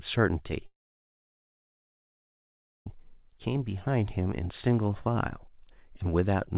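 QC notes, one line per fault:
0.66 to 2.88 s, long network dropout. The sound breaks off and a short buzzy continuation fades away. About 2.1 s of near silence follows. Audio resumes at 2.88 s with that stretch gone, likely because packets stopped arriving and concealment ran out.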